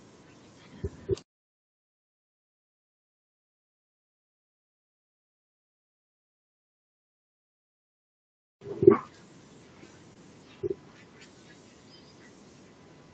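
At 10.13 to 10.17 s, about 20 ms of the call's audio missed the decoder, a short concealed packet loss. The receiver extended the preceding speech to fill the gap, then blended back, leaving a brief smear or wobble in audio capped at 8 kHz.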